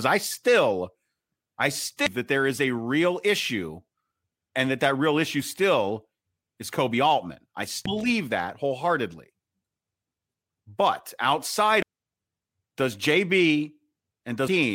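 Damaged data in the compressed speech stream makes the decoder misread frames and lose sync, causing brief blips at 2.06 s, just before "that there is a", and at 7.86 s, just before "believe that wholeheartedly". Further blips occur from 11.82 to 11.86 s and at 14.48 s.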